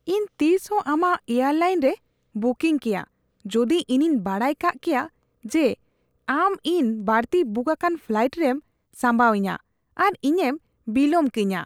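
No technical faults can be heard anywhere in this recording of speech.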